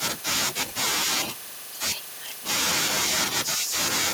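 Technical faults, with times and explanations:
1.35 to 1.64 s, echo leak: a faint copy, well below the speech, trailing about 294 ms behind, likely a far-end canceller letting loudspeaker pickup through.
2.69 to 3.45 s, echo leak: a much stronger copy, nearly as loud as the speech, about 196 ms late, likely the same canceller failing.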